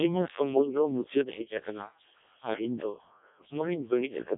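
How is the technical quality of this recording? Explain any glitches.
Pretty rough, honestly. The whole recording has gone through a Codec 2 vocoder, and the damage is heavy. Codec 2 doesn't keep the waveform. It sends only pitch, voicing, energy and a coarse spectral envelope, then rebuilds the voice from sine waves. So the speech comes out robotic and buzzy. The smearing is severe enough to point to the lowest mode, around 0.7 kbit/s. It sits in a narrow radio-style band of roughly 250 Hz to 3.7 kHz, with nothing above 3.8 kHz.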